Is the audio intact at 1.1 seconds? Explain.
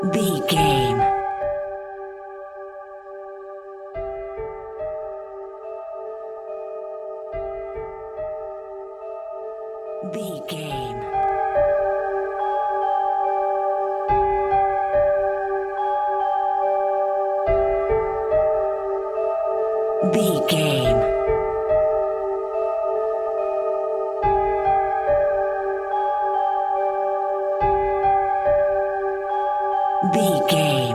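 No. At 1.1 seconds the sound carries a fast ticking, zipping texture, the zipper noise running from 1.03 to 1.79 s. The level drops roughly 10 dB in unsmoothed 2 dB steps, about ten a second, each step leaving a small click.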